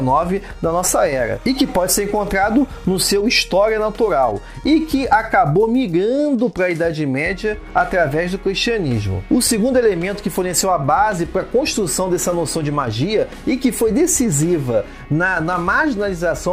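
From 0.88 to 3.10 s, timecode bleed sits behind the sound: a steady chirping warble switching between tones near 1 and 2 kHz, roughly 30 dB below the signal. Linear timecode running at 29.97 frames per second has leaked across from an adjacent track or cable.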